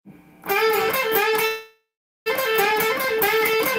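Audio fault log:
1.47–2.28 s, call audio freeze: the sound stops advancing and the last moment is drawn out as a fading buzz for roughly the first third of a second, then drops to silence for about 430 ms. When the audio resumes it carries on from exactly where it halted, with nothing skipped, so the stream now runs about 785 ms later than before. This pattern likely comes from delayed packets draining the receiver's jitter buffer, with concealment filling the wait.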